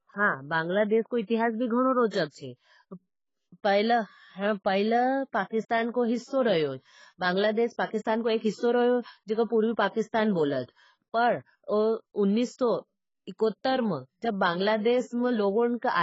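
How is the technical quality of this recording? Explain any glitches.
The recording is heavily degraded, with coding damage throughout and one short pre-echo.

AAC compression affects the whole clip. Nothing reaches above 7.6 kHz, so the speech sounds dull and muffled. Sibilants turn fizzy and smeared. This heavy damage points to a bitrate around 16 kbps, the likely cause being AAC-LC encoding.

Pre-echo occurs from 9.89 to 9.95 s, just before "बोलत पर". A sharp attack fell late in a transform block. The codec spread that block's noise across its full length. So about 56 ms of hiss leads in, and the onset sounds softened.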